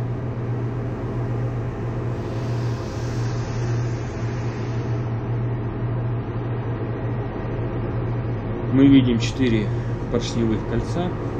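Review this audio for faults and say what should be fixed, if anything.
From 3.25 s to 9.25 s the stream drops to a lower bitrate. Treble vanishes above 7.8 kHz, fitting a switch from 128 to 32 kbit/s MP3. Raise the lowest bitrate rung or buffer more to avoid this.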